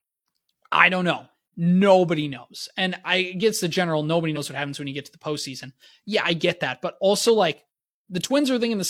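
At 4.32 s, just after "gets the general nobody", the speech lurches forward before "what happens when you". That is compressed frames skipped: about one 46.4 ms frame never got decoded, so roughly 50 ms of audio is simply missing.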